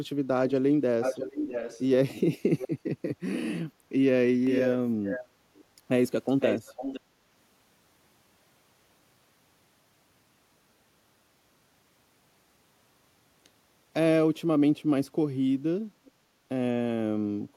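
Echo leak, most likely from a loudspeaker whose echo canceller let its own playback back into the microphone, appears as a delayed copy of the speech at 0.48 to 1.86 s, 2.58 to 2.68 s and 4.45 to 5.24 s. In the first two the copy trails by 648 ms, and from 4.45 s it trails by 510 ms. The long stretches sit only about 5 dB under the speech and the short burst about 10 dB under. Unlike room reverberation, which smears the sound into a tail, this is a distinct repeat at a fixed lag.

At 5.56 to 5.64 s a faint scrap, about 30 dB down, slips through. Right after it, from 5.65 to 5.82 s, the room background is gated by the echo canceller, dipping by up to about 7 dB for roughly a tenth of a second before recovering. This differs from a network dropout because the speech path stays intact and only the ambient bed sinks while the canceller clamps down.

Echo leak returns at 6.27 to 7.0 s at about 5 dB down, with a final faint trace at 16.05 to 16.11 s, both at the 510 ms lag.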